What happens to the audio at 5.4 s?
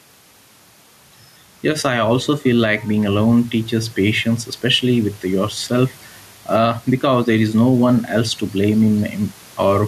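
Gain pumping is audible at 5.4 s, as it is across the whole clip. The gain is likely set far too high for the microphone, so a fast limiter pulls the level down on each loud syllable and lets it rise again in the pauses. The room noise sits about 33 dB below the speech, and the gain swings by around 10 dB, leaving the speech squashed.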